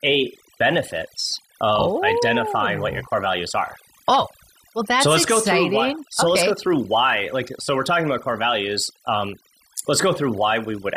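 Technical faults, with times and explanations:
Throughout: overdone noise removal. A noise reduction stage set too strong shuts down individual frequency bands whenever they sit close to its idea of the noise floor, and the softer parts of the speech go along with them. Between phrases the background drops to near silence dotted with twinkling specks. On a spectrogram the gaps show as dark voids scattered with isolated bright dots, and the speech looks patchy.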